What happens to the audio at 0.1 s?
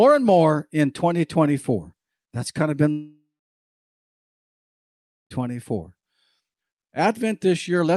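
Nothing goes wrong at 0.1 s: the speech passes through intact, with only the ordinary character of the Opus call path behind it.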